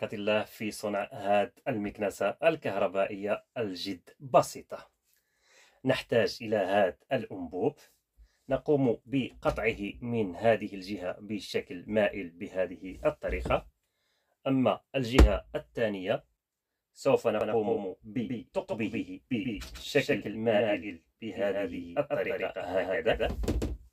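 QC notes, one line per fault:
17.41 s to end: doubled audio track. A full-band copy of the sound trails about 150 ms behind the original, roughly 5 dB quieter, with no decay or room colour. It cuts in abruptly, likely from a second, slower capture path mixed in.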